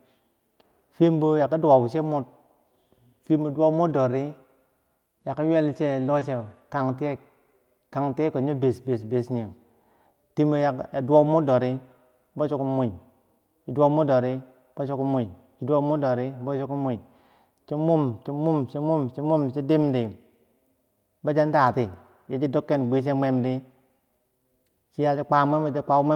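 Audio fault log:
3.89, 6.21 and 19.81 s: lost packet rebuilt from error correction. Each time one 20 ms packet went missing, the first just after "bo dowau". The next packet's low-bitrate copy filled it, leaving no gap, only a briefly rougher, noisier patch.
6.19 to 6.23 s: short concealed packet loss. About 20 ms arrived too late, so the decoder continued the preceding sound and blended back into the real signal, causing a brief smear or wobble.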